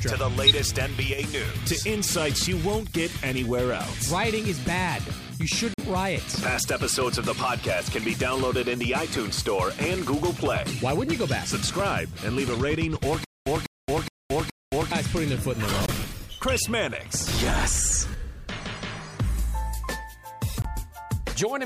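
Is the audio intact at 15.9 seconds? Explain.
No. From 15.86 to 15.90 s there is a corrupt frame muted fault: an abrupt gap of silence about 38 ms long, consistent with two compressed frames of roughly 19 ms each being lost. Damaged bits in those frames caused the decoder to reject them, and the player substituted silence instead of decoded audio. The sound cuts off suddenly and resumes after the hole, with no shift in timing on either side.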